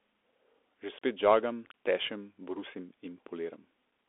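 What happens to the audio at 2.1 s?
At 2.1 s you're hearing the Bluetooth CVSD headset codec, which runs through the whole clip. Each sample is a single up-or-down bit with an adapting step, and the band tops out near 3.8 kHz, with a thin, scratchy, granular edge that fits a 64 kbps CVSD link.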